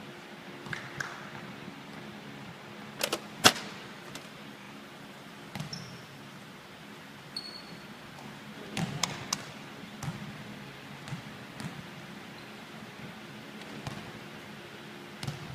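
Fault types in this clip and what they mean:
Repeated frames: at 4.61 s the decoder replays the same 40 ms of compressed audio two extra times, producing a brief stutter and adding 80 ms.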